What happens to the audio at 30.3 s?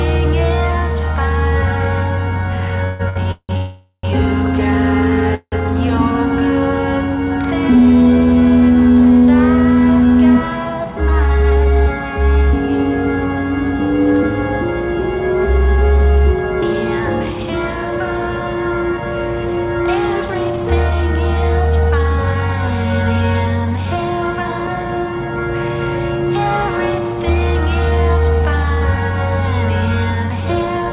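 At 30.3 s you're inside a jitter buffer speed-up that runs from about 27.91 s to the end of the clip at 30.93 s. The receiver had built up more buffered audio than it wanted, so it kept snipping out short pitch-period-sized slices back to back, shedding roughly a fifth of a second in total. The pitch stays put, but the sound plays about 6% fast and comes across a little rushed.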